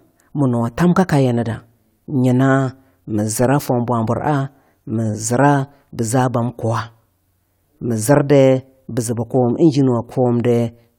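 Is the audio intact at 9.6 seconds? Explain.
Yes, the audio is intact at 9.6 seconds, with no fault to be heard at that moment.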